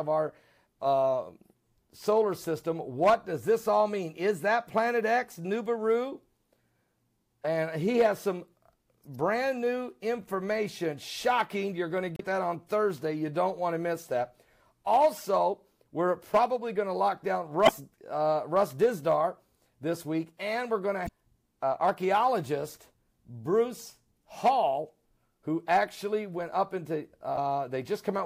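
Damaged data in the compressed stream makes the decoder lose frame sync, giving brief glitches of about 45 ms at 12.16–12.21, 17.65–17.69, 21.04–21.09 and 27.34–27.38 s.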